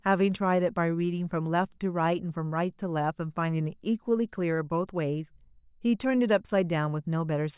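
No technical faults can be heard anywhere in the recording.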